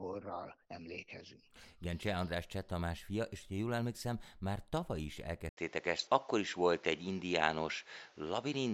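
A speech recording whose sound turns duller and narrower at 5.49 s, right after "emlékszem már tavaly is", and stays that way to the end at 8.74 s. A brief gap of about 80 ms marks the change, nothing above 7.6 kHz survives, the level shifts by roughly 5 dB, and a new noise floor sits around 35 dB below the signal. The likely cause is an input switched to a poorer device mid-recording, with a narrower band and its own tone and noise.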